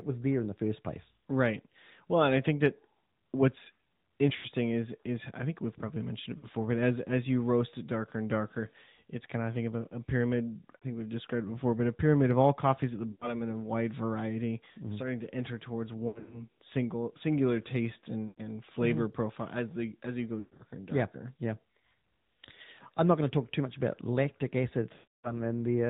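Throughout, the speech carries AMR narrowband mobile codec coloring: nothing above 4 kHz, and a buzzy, synthetic edge from the vocal-tract model and sparse pulse excitation, plainly audible and consistent with a mid-rate mode near 10.2 kbps.

Lost AMR speech frames occur at 4.36, 6.38, 10.76, 13.12, 16.08, 18.28, 20.40 and 24.94 s. At each, the decoder stretches the last good pitch and spectral settings with decaying gain, producing a smeared, warbling sustain of 40 to 300 ms. The events at 16.08 and 20.40 s are broken, scattered dropouts over 240 and 200 ms. The final 300 ms run fades toward silence.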